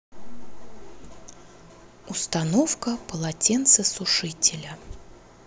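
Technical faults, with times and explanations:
Nothing stood out on listening to the speech.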